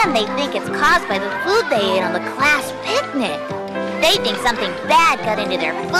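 No technical faults can be heard anywhere in the audio.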